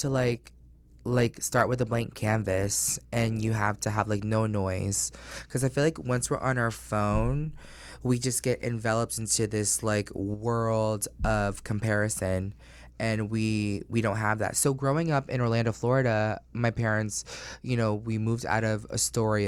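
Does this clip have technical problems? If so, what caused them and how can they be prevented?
Yes. An adaptive stream starting at a low bitrate: the player began on a cheap rendition, consistent with roughly 24 kbit/s Opus, until about 4.0 s. The treble is thin and artefacts are stronger, then quality jumps without a gap just before "like no noise because". Preventing it means starting playback on a higher-bitrate rendition or letting the player measure bandwidth before it begins.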